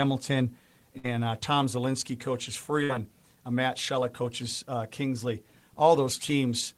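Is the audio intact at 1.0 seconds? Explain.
No: a burst of packet loss runs from 0.97 to 1.07 s. The receiver stretches the preceding sound into a fading 61 ms continuation, not silence, then the speech skips ahead past 60 ms of missing audio.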